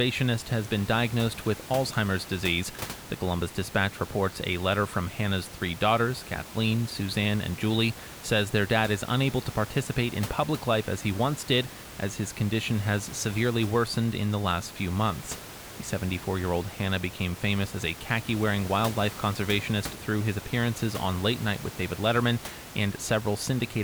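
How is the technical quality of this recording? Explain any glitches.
The recording has no technical glitches: the speech signal is continuous and intact, and the room's own background noise sits about 15 dB beneath it as part of the captured sound, not as a fault of the system.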